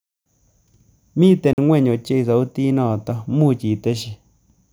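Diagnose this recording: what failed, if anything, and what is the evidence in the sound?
A block of digital silence breaks the speech from 1.53 s to 1.58 s, a hole about 46 ms long. The stage is the driver or buffer. The sound drops straight to silence and returns with no fade. That abrupt gap means a whole output buffer went unfilled in time. Its length fits a 2048-sample buffer, and the missing buffer was replaced with zeros.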